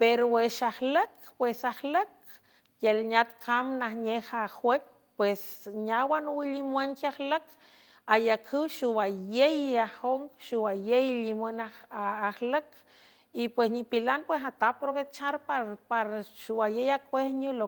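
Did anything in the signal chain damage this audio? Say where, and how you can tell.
No, nothing in the signal chain has damaged this speech recording. I can't hear a mark left by any stage, from the analogue wiring and converter through to storage and playback.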